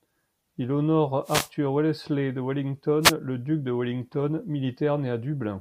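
At 1.24 to 1.50 s and again at 3.01 to 3.13 s, a wireless microphone noise hit breaks through the speech: the FM radio link fades, receiver hiss surges as a brief static swish, showing as a broadband vertical smear on the spectrogram and thickened fuzz on the waveform.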